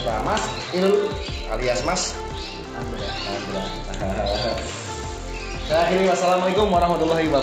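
From start to end, the resampler is restarted on every block. Each 20 ms block is converted from 16 kHz to 48 kHz alone, so its edges lack real neighbours. The small edge errors repeat at 50 Hz, giving a buzz present only while sound plays.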